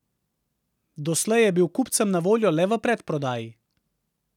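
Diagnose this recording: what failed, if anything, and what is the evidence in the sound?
Nothing failed: no stage in the chain leaves audible evidence of a fault anywhere in the speech.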